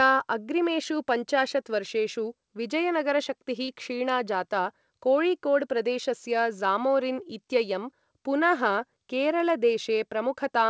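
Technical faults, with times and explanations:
3.64–3.70 s, short concealed packet loss: a brief smeared wobble in the speech, as roughly 40 ms of audio arrived too late to decode and the receiver extended the preceding sound to cover the gap before blending back into the real signal, through a G.722 path with nothing above 8 kHz.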